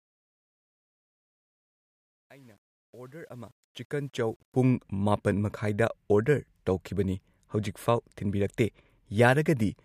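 The fade-in from 0.0 to 4.69 s has truncation distortion: undithered 10-bit steps sound gritty, worst until 3.86 s, showing stair-stepped waveforms and broadband spectrogram hash.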